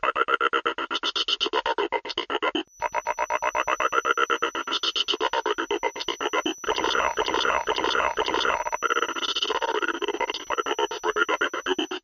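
At 1.79 to 1.81 s, compressed frames are skipped. The audio jumps ahead by roughly 200 ms, which fits about five frames of 46.4 ms that the decoder never played.

From 2.62 s to the end, a feedback whistle sits at 5.9 kHz. It is thin and steady, about 20 dB below the main sound, and swells and fades slowly in level. The likely cause is a speaker-to-microphone loop held just short of runaway.

At 4.67 to 4.71 s, frames skip again. Roughly 100 ms goes missing, about two frames.

From 8.51 to 10.61 s, there is a time-stretched section. The pace suddenly runs 1.9 times faster while the pitch holds. It sounds rushed, likely from software squeezing the passage by dropping short pieces.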